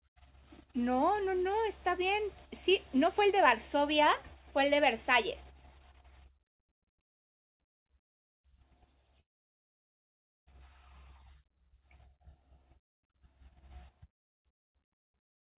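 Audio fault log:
9.20–10.61 s, long network dropout: The likely cause is a stall in packet delivery, with about 1.0 s of audio never arriving. The receiver briefly extends the last sound as a fading buzz, then holds near silence for about 1.25 s. When the stream resumes, the missing stretch is skipped rather than replayed, so the sound jumps forward. Playback also runs around a third of a second behind where it did before the gap.
12.12–13.11 s and 13.71–15.53 s, jitter buffer speed-up: Audio has backed up in the receive buffer beyond its target, so the receiver trims tiny pitch-period slices again and again to catch up. In the first run the sound plays about 8% fast, and in the second about 3% fast, with the pitch unchanged. Together the two runs drop under a fifth of a second, and the first run comes across as hurried.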